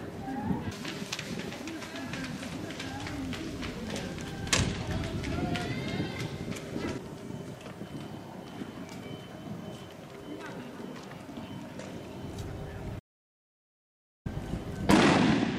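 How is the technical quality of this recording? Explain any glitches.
The recording has one clear glitch, an audio dropout to silence from 12.99 to 14.26 s. For about 1.26 s the signal falls to silence with no room tone, then resumes abruptly. The input was likely lost, through a disconnected device, broken link or accidental mute, while the recorder kept writing empty samples, so that stretch of sound is gone.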